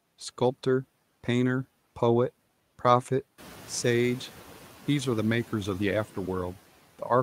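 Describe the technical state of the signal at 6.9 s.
At 6.9 s the signal is intact, with only the room's own background noise audible about 21 dB below the speech.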